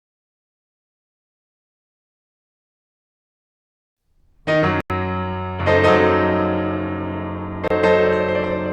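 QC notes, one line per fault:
4.81 to 4.90 s and 7.68 to 7.71 s, Bluetooth dropout: packets likely missed their delivery deadline to the headphones and were discarded, so the music cuts to silence for about 93 ms, then 27 ms, and resumes further along, as if it had kept playing.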